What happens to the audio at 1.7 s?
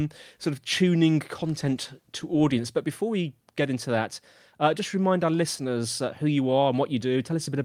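Nothing goes wrong at 1.7 s: the speech carries on intact through that moment, with no dropout, click or distortion.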